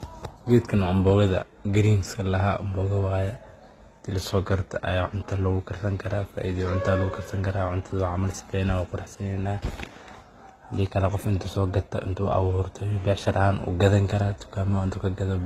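Speech, with transcoding between lossy codecs throughout: swirly, smeared highs overlaid with a second layer of grainy coding noise, likely from a low-bitrate HE-AAC encode later re-encoded to Opus. A spectrogram shows a hard ceiling at 15.6 kHz and patchy, blocky upper bands.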